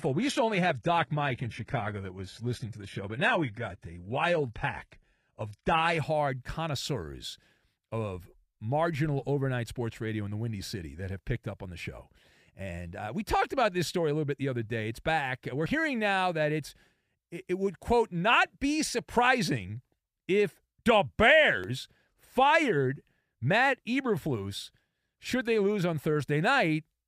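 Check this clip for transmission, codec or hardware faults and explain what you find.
Two faults are audible: a low-quality opening from an adaptive stream, and brief skips at regular intervals.

The adaptive stream starts at a low bitrate from 0 to 5.98 s. The player began on a cheap version of the stream and switched up once it had measured the connection. That opening sounds dull and swirly, with nothing above 11.8 kHz, which fits HE-AAC at about 16 kbit/s. Just before "connoisseurs of marginal overnight" it jumps without a gap to a fuller sound consistent with AAC-LC at 96 kbit/s.

Audio goes missing between chunks at 3.71, 9.68, 15.66 and 21.64 s. These are abrupt skips, each removing roughly 20 ms, with the two sides butted together. One falls just before "hearing now that it's" and another just after "be surprising if the". The steady 6-second spacing points to the likely cause: a recorder dropping samples while closing one chunk and opening the next.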